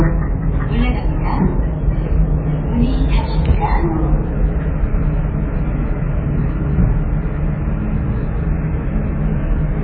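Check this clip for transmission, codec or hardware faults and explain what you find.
One codec fault runs through the whole clip. Throughout, the sound is heavily damaged, likely by MP3 compression at a bitrate near 16 kbps. Nothing is left above 4.5 kHz, and weak components flicker frame to frame, producing a watery swirl that a plain low-pass filter wouldn't cause.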